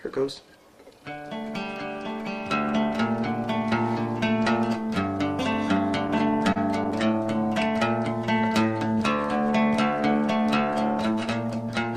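From 6.07 to 7.47 s come repeated stalls (stutter). Late packets emptied the jitter buffer eleven times, and each gap, up to 32 ms long, was filled by extending the preceding sound. Nothing is lost, but the audio drags and stutters. A spectrogram shows brief smeared, repeated slices.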